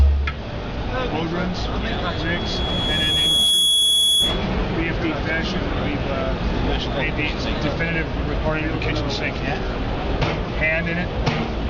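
From 1.97 to 4.53 s, loudspeaker feedback squeal: a steady 3.4 kHz tone swells over roughly a second and a half to about 5 dB above the sound. Its single fixed pitch and self-reinforcing build separate it from a brief whistle or interference.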